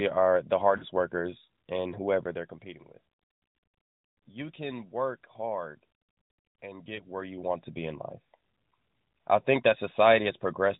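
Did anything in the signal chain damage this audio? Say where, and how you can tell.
Yes. Lost AMR speech frames on the radio link caused two gaps: after "are the" at 0.78–0.84 s, lasting about 40 ms and fitting two frames, just before "workers and", and again at 6.96–7.01 s for about 20 ms. The decoder repeated the last pitch and vocal-tract settings at falling gain. On a spectrogram the harmonics smear flat and fade, and the waveform envelope briefly dips.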